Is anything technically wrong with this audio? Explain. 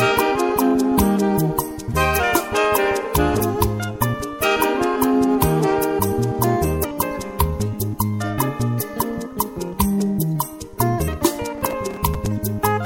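Yes. Two faults can be heard.

Compressed frames skipped: at 1.87, 3.39, 6.83 and 11.07 s the sound lurches forward with a short smeared blip, not a sharp click. About 0.2, 0.15, 0.4 and 0.15 s of material goes missing at those points. Whole compressed frames were never decoded, either absent from the file or rejected as corrupt, so playback resumes further on. The overlapping frames blur each join, and the jumps fit a 26.1 ms frame length.

Processor overload crackle: from 11.58 to 12.26 s a gritty, tearing crackle rides over the sound. The processor repeatedly failed to finish its small audio buffers in time. Each missed deadline replayed a fragment of old audio with abrupt edges, and this string of hard-edged repeats produces the rough texture until the load eases. The size of each fragment fits buffers of around 5 ms.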